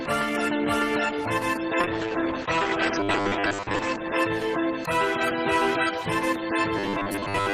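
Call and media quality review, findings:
Call bitrate drop, 1.81–5.01 s: encoder rate falls from 32 to 11 kbps, bottoming out for 1.89 s. Coarser coding plus bandwidth cut from 20 kHz to 8 kHz; sound turns rough and muffled until rate recovers. Component: bandwidth estimator driving Opus.

Robotic sound from repeated short buffers, 3.00–3.79 s and 6.77–7.53 s: rigid metallic buzz at 100 Hz, fitting a 10 ms segment looped over roughly half the audio. Likely cause: playout buffer underrun, receiver repeating last frame while real audio is skipped.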